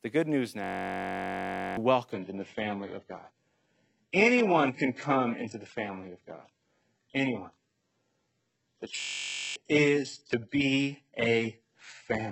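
Just after "the good news", from 0.64 to 1.77 s, the sound locks into a system hang loop. One 21.33 ms fragment repeats exactly 53 times, forming a steady buzz at 46.9 Hz, which fits a 1024-sample ring buffer cycling while the driver was frozen. About a second of audio is lost. What separates this from ordinary dropout stutter is that the repetition is identical, with no gaps, so it is heard as a pitched drone rather than as broken sound.

At 2.12 s the quality drops abruptly into an adaptive stream at a lower bitrate, and it stays there to the end. Nothing is left above 8 kHz, as expected from a very low-bitrate switch. Unlike a dropout or a buffering stall, the change comes with no silence or gap. Only the fidelity changes.

From 9.00 to 9.56 s the same hang loop returns, this time 26 repeats of the 21.33 ms fragment. It gives the same 46.9 Hz buzz and swallows about half a second of audio.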